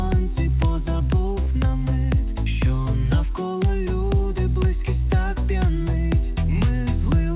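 The sound comes through a telephone-band call path, with nothing above 4 kHz, as G.711 mu-law gives. Short concealed packet loss occurs at 1.44 to 1.48 s. About 20 ms of audio arrived too late to decode. The receiver extended the preceding sound to fill the gap, then blended back. It is heard as a brief smear or wobble.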